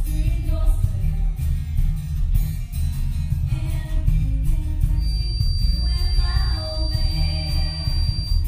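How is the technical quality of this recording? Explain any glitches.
The recording has one glitch, a feedback whistle in its second half. From 4.93 s to the end at 8.48 s, a thin, steady tone near 4.7 kHz rides around 15 dB below the sound, swelling and fading slowly in level. The likely cause is a loudspeaker-to-microphone loop poised just at the feedback point, sustaining that single frequency without building up.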